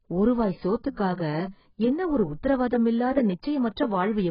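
From start to finish the speech sounds dull and smeared, with nothing above about 5.1 kHz and a warbling, fizzy texture on sustained sounds and sibilants. The likely cause is heavy AAC compression. An AAC-LC encoder starved of bits lowers its cut-off, drops or roughly fills whole frequency bands frame by frame, and quantises what remains coarsely. The depth of that damage fits a bitrate near 12 kbps.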